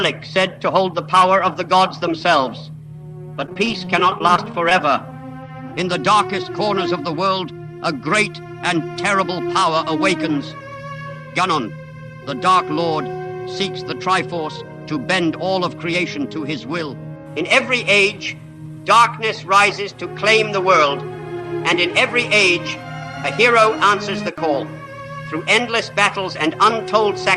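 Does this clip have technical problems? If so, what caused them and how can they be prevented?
Yes, there's a stretch of repeated packet loss (robotic sound) from about 3.46 to 4.71 s. The audio turns choppy there because the stream kept dropping or delaying packets. Each hole got patched by stretching the last bit of sound, and then the next hole arrived right behind it. The dropouts are short, the longest around 26 ms, but together they cover roughly 13% of that span. A steadier network path with a larger jitter buffer and forward error correction would prevent it.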